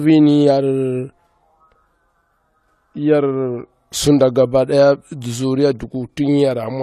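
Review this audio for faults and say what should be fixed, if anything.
Transcoding between lossy codecs runs through the whole speech clip. Nothing is heard above 13.9 kHz. The two kinds of damage sit on top of each other. The likely cause is an HE-AAC encode at around 48 kbit/s, later re-encoded as AAC-LC. The second encoder wasted bits on the first one's artefacts and added its own. To prevent this, encode once from the original source.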